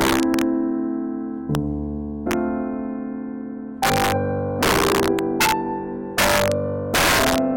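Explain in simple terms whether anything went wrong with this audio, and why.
Integer overflow hits this music at 0.01 to 0.42 s, 1.55 s, 2.31 to 2.33 s, 3.83 to 4.12 s, 4.63 to 5.52 s, 6.18 to 6.52 s and 6.94 to 7.38 s. When the loudest peaks pushed past the biggest number the system could store, they weren't capped. They wrapped around to the opposite extreme. That gives harsh, violent cracks, much sharper than ordinary clipping, and they are strongest in the later, longer stretches.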